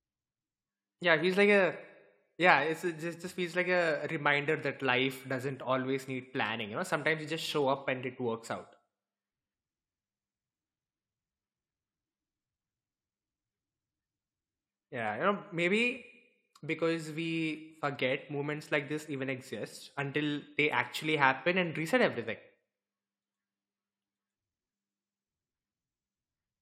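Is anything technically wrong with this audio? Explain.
No, nothing technically wrong stood out on listening to this speech recording.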